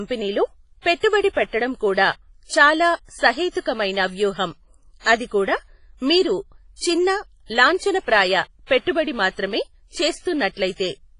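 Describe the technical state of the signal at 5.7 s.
At 5.7 s the speech carries the same damage heard across the whole clip, likely WMA compression: ringing, washy smearing with hiss that breathes alongside the signal, consistent with a low bitrate around 24 kbps. Nothing remains above 10.4 kHz, but unlike a plain low-pass filter, the remaining band itself sounds heavily degraded.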